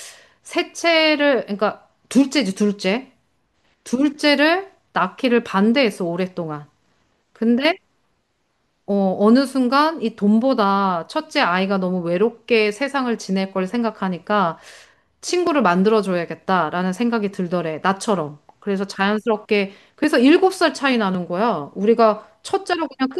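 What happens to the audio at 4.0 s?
Nothing goes wrong at 4.0 s: the speech carries on intact through that moment, with no dropout, click or distortion.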